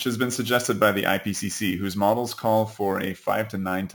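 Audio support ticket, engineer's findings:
Metallic fizz on speech, throughout, tracking speech level. Imaging from sample-and-hold upsampling: samples repeated with no smoothing filter. Fits a 16 kHz source raised to 44.1 kHz. Spectrogram shows a mirrored copy of the 0–8 kHz band from 8 to 16 kHz, about 18 dB below the signal, with harmonics sloping opposite to pitch. Waveform zoomed in shows staircase steps.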